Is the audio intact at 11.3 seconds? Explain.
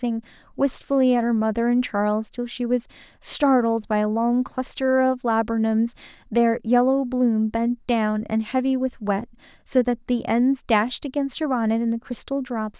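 Yes, at 11.3 seconds the speech is intact, with no audible fault at that moment.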